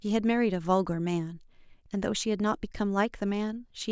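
No audible faults anywhere in the speech.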